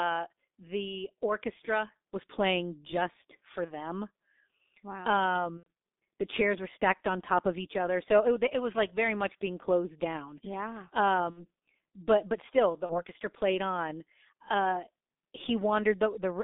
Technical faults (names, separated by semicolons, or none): G.723.1 codec; VoIP packet loss concealed by the speech codec